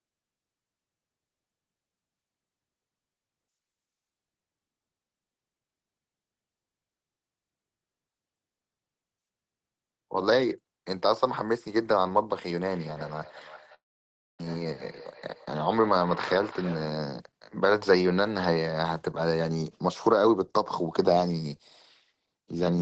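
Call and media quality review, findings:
Feedback echo between two devices, 12.65–16.95 s: a second device's playback is re-captured by the microphone and looped back, returning the speech at roughly 300 ms intervals, thinner each pass, peaking about 16 dB below speech.

Long network dropout, 13.74–14.41 s: likely a loss of packets. Concealment continues the last sound as a fading buzz, then near-silence; about 0.5 s of speech is lost before audio resumes, delay shifted roughly 150 ms.

Jitter buffer speed-up, 14.48–14.74 s and 15.54–16.63 s: the buffer trims excess delay by cutting pitch-period fragments, roughly 50 ms then 100 ms in total. Speech runs 16% then 7% fast at unchanged pitch and sounds hurried.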